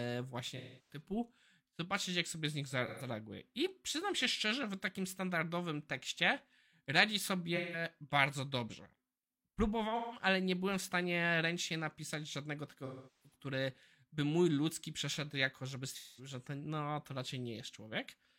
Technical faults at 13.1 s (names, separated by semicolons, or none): AAC frame loss with concealment